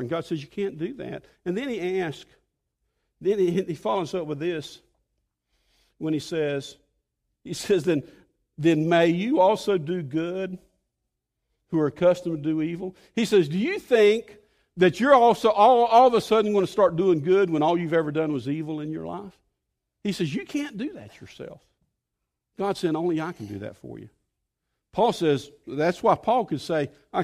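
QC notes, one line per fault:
Nothing to flag on this one; no technical faults turn up anywhere in the speech.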